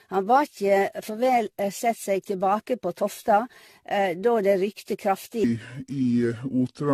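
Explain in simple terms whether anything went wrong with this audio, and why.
Two things went wrong with this speech.

The first is generation loss, and it runs through the whole clip. The sound is swirly, smeared and hollow. Sharp starts of sounds are blurred. Nothing is heard above 14 kHz, so the top end is dull. This likely comes from the audio being squeezed and unpacked about ten times in a row. Each round throws away a bit more detail, and the damage piles up.

The second is a section at the wrong speed. From 5.44 s to the end, the speech suddenly plays slower. It runs at about 0.69 times its proper speed. Because speed and pitch move together, the voice also drops, by roughly seven semitones. It sounds deep and dragging. This is likely a playback or editing step that used the wrong clock for that last stretch.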